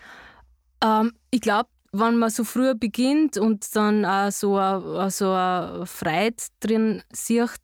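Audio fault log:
Nothing to log here, since no technical faults turn up anywhere in this speech recording.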